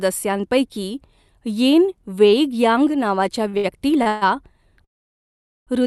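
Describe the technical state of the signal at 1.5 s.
At 1.5 s the signal is intact, with no dropout, glitch or distortion, just the steady coding character and upper band limit of the call path it passed through.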